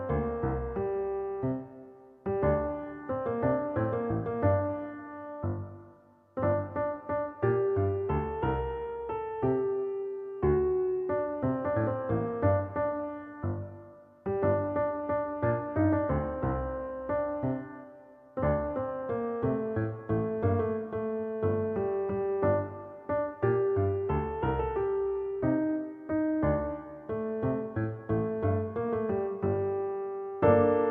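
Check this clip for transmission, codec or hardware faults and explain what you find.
No faults can be heard anywhere in this recording. There is nothing in the sound that calls for an explanation.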